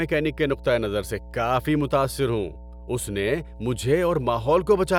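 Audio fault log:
Throughout, mains hum: a steady 60 Hz tone with some low harmonics sits under the speech at roughly 15 dB below the signal, from power-line current leaking in through a ground loop or nearby transformer. Unlike broadband rumble or handling noise, it holds one fixed pitch that never drifts or swells with the talker, and its 60 Hz base rather than 50 Hz points to a 60 Hz supply.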